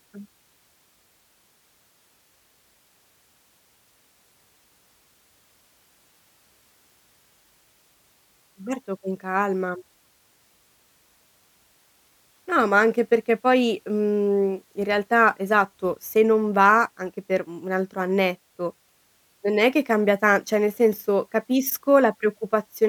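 No technical faults are audible anywhere in the recording.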